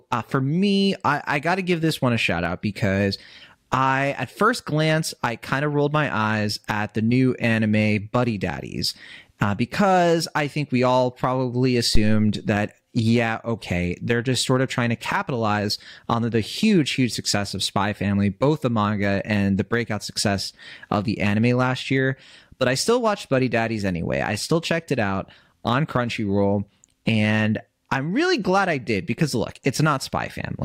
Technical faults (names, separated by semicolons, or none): phantom power thump